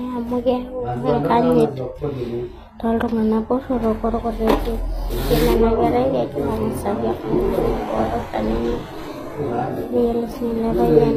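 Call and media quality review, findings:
HE-AAC compression, throughout. Sibilants gritty, metallic, lispy; treble synthetic, harmonics misaligned above crossover. Likely cause: HE-AAC v2 spectral band replication, with the low band coded and the upper band copied upward under a coarse envelope. Damage plainly audible, consistent with roughly 24 kbps. Spectrogram: hard ceiling at 15.4 kHz, repeated blocky texture above crossover, harmonic lines breaking at the join.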